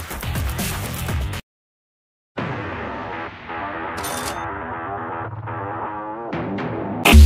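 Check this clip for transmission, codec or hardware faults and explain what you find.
Nothing wrong can be heard anywhere in this recording.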